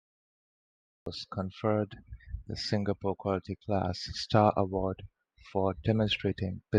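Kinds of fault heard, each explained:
Cut-off start: Digital silence runs until 1.06 s, then speech begins abruptly mid-sound, with no natural attack, because recording started late.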